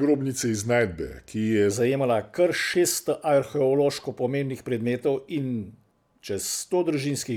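From the start to 1.71 s the speech sounds deep and sluggish, about two semitones low and slowed to 0.88 times normal speed. This section at the wrong speed was likely played against a mismatched clock, so pitch and pace dropped together.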